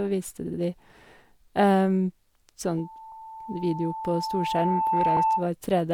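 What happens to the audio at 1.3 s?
At 1.3 s the speech runs on intact, with no dropout, click, glitch or other fault at that point.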